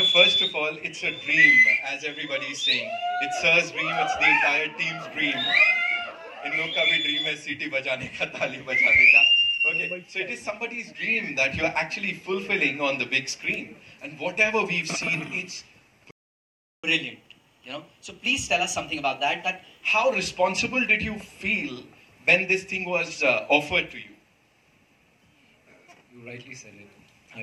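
The audio goes silent from 16.11 to 16.84 s, a playback stall of about 0.73 s, likely from the player running short of data. A catch-up at higher speed follows from 16.84 to 19.84 s. Playback runs at 1.1 times normal speed, and pitch rises by about a semitone and a half along with tempo, unlike time-stretching, which keeps pitch steady. It then settles back to normal.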